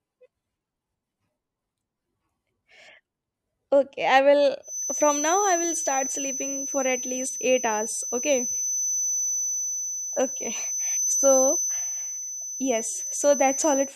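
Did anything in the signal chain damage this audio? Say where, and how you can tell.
Yes. From 4.61 s to the end of the clip, a feedback whistle sits behind the speech: a thin, steady tone at 6 kHz, only a few decibels below the speech level, swelling and fading slowly in level without ever building up. The likely cause is acoustic coupling, where loudspeaker output reaches the microphone with loop gain just under unity at 6 kHz. That frequency rings on indefinitely but never runs away into full howl.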